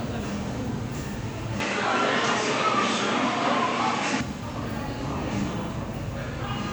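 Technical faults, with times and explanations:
1.60 to 4.21 s, input switched to a poorer device: the sound suddenly goes dull and boxy with nothing above 8.5 kHz, shifts level by roughly 5 dB and picks up a faint new noise floor, then clears up again. It's likely a swap to a lesser microphone mid-recording, with no gap at either switch.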